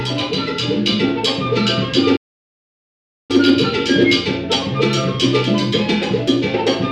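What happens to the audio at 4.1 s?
Nothing goes wrong at 4.1 s; the audio plays through that moment intact, with no dropout, click or distortion.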